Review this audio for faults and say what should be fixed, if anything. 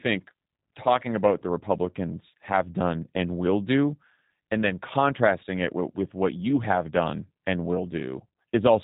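The G.729 codec runs throughout: nothing passes above 3.8 kHz, and the speech has a rough, buzzy, synthetic edge, which fits an 8 kbit/s coder rebuilding each frame from a vocal tract filter, pitch predictor and sparse pulses. A plain low-pass would only sound dull, not artificial like this. To prevent it, carry the call or recording over a wideband codec at a higher bitrate.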